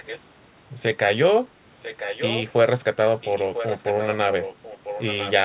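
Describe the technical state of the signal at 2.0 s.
At 2.0 s there is an echo leak from 1.76 to 2.45 s: a discrete copy of the speech arriving about 1.0 s late and roughly 10 dB quieter, likely a far-end loudspeaker's echo that its canceller missed. Unlike room reverberation, it is a separate repeat rather than a smeared tail.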